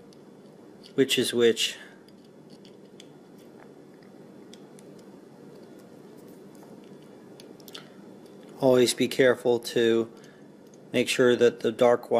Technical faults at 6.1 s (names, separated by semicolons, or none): none